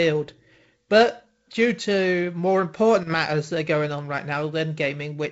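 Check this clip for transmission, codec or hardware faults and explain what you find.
No transmission, codec or hardware faults turn up in this speech recording. What can be heard is G.722 wideband telephone coding, with nothing above about 7.7 kHz and a light, slightly noisy coding texture that fits G.722 running at its reduced 48 kbit/s rate.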